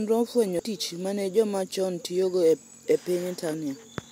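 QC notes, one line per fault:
0.59 s, damaged data in a compressed stream: a very short blip just before "tich mane joma chon", where corrupted bytes made the decoder misread a frame before it resynchronised. On a spectrogram it is a thin broadband vertical streak. The waveform shows an abrupt step or spike.
3.50–3.54 s, damaged data in a compressed stream: a longer glitch, about 36 ms, from the decoder losing sync and searching for the next valid frame header. It shows as a brief smeared broadband patch and a jagged discontinuity in the waveform.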